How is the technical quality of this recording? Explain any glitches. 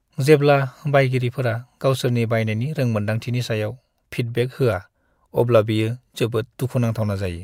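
No technical glitches can be heard in the recording; the signal holds steady throughout, with no audible interruptions, distortion or level problems.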